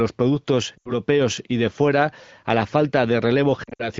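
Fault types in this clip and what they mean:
lost AMR speech frames: fading dips to near silence at 0.77 s and 3.64 s, where the decoder repeated old pitch and vocal tract settings over damaged frames.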